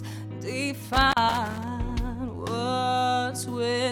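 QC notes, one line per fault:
0.90–1.68 s: loose connector crackle. For roughly three quarters of a second the signal breaks up into an irregular burst of crackle and scratching. A worn or dirty contact in the signal path is making and losing connection as it shifts. Each break chops the audio, and any DC present on the line turns every make and break into a pop. Because the contact movement is random, the resulting texture is uneven rather than periodic.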